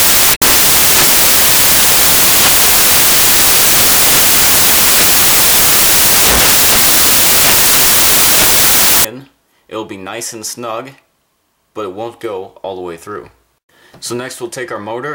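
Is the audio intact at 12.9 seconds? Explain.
Yes, the audio is intact at 12.9 seconds, with no dropout, glitch or other fault at that moment.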